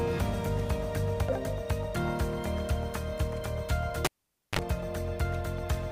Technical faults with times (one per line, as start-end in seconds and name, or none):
4.05-4.59 cable pulled and plugged in